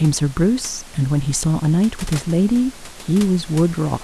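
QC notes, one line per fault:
No fault to note in this speech clip.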